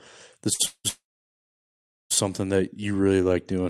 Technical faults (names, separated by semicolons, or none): short stall from a late packet; call audio freeze; jitter buffer slow-down